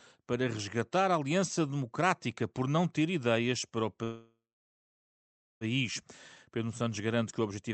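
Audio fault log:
4.03–5.64 s call audio freeze: after "ter ideias para o", a fading buzz or hiss then 1.2 s of silence, likely from an emptied jitter buffer; speech resumes intact, with nothing cut as in a dropout.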